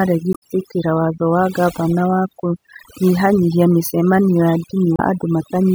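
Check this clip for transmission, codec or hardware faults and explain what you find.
Two faults are present in this speech clip.

Overdone noise removal runs through the whole clip. A noise reducer set too hard is switching off individual frequency bands whenever they sit near its noise estimate. Quiet parts of speech vanish with the noise. The background drops and breaks up into twinkling specks.

Damaged data in a compressed stream appears twice. The first is from 0.30 to 0.43 s, just before "watho wa gavana wa". The second is from 4.96 to 5.00 s, right after "gavana wa kũnyihanyihia mĩcemanio". Corrupted bytes made the decoder misread frames, lose sync and hunt for the next header. Each spot is brief.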